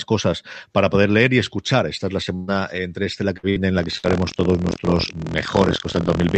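Just after "es la", from 2.35 to 2.51 s, the sound smears into a held, fading fill before jumping ahead to "entre esta la". This is a burst of packet loss: about 120 ms of packets never arrived, so the receiver stretched and faded the last audio to fill the gap. Two more follow shortly after "entre esta la", at 3.38 to 3.46 s and 3.49 to 3.59 s, each covering roughly 60 ms of missing audio.

From 3.77 s to the end, a steady robotic rattle at 43.1 Hz rides on the speech. This is buffer tearing. The program writing the ring buffer and the hardware reading it have drifted out of step, so a small slice of each period replays audio from about 50 ms earlier, with hard joins on either side. The rate fits a 1024-sample buffer.

Inside that stretch, another packet-loss burst at 3.98 to 4.06 s replaces about 60 ms with a fading fill. Throughout, the Opus call path limits the bandwidth to 8 kHz.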